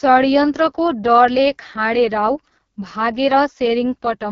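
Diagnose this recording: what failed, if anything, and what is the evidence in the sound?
The fault lies in the codec stage: an AMR wideband (HD Voice) codec running at very low rate. Throughout the speech, the sound is rough and raspy, with nothing above about 7.3 kHz. That band edge rules out a narrowband phone codec, which stops near 3.4 kHz. The heavy rasp, rather than a clean band limit, separates it from a simple low-pass filter. A pulse-excited vocal tract model starved of bits gives this texture, which points to the lowest AMR-WB mode, around 6.6 kbit/s.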